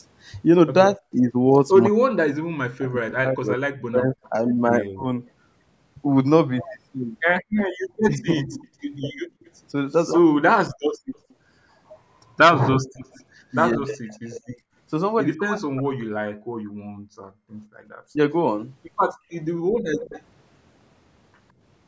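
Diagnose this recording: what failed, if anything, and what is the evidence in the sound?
Speech suppressed in double talk, at the call-processing stage. Speech dips or cuts out from 0.97 to 5.12 s, 8.16 to 9.05 s and 13.76 to 18.18 s, by roughly 40 dB in the first and last spans and about 15 dB in the middle one. The likely cause is the echo canceller turning down its own talker along with the loudspeaker echo during overlapping speech.

Echo leak, also in call processing. A copy of the speech returns 160 ms late at 4.23 s, 7.57 to 13.55 s and 19.95 to 20.22 s, at roughly -35 to -15 dB relative to the speech. Echo cancellation likely left residue.

Background gated by the echo canceller. Room sound drops by about 32 dB between 7.42 and 11.11 s and between 16.67 and 19.75 s. It returns when the canceller releases.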